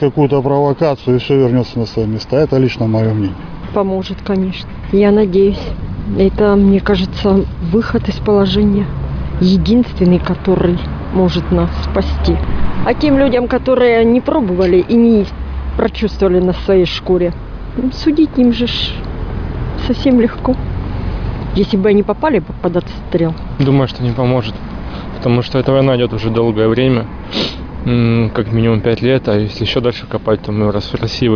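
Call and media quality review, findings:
No call or media quality findings to report for this clip.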